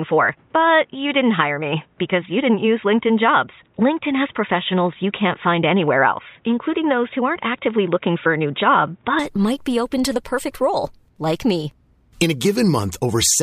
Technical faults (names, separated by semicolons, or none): input switched to a poorer device